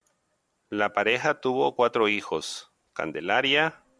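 Nothing to flag: no technical faults can be heard at any point in the speech.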